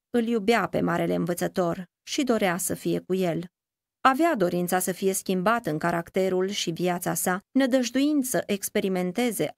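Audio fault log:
No faults are heard in this speech recording. Nothing in it calls for an entry in the log.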